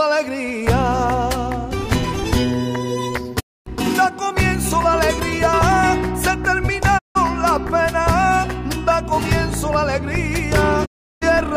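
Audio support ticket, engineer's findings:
Short silent holes, sound fading out over about 20 ms, then returning: 3.39–3.68 s, 6.97–7.17 s, 10.84–11.24 s. Digital broadcast dropout. Receiver muting on lost or checksum-failed frames; gap lengths fit whole 32 ms frames. Audio sent during gaps unrecoverable.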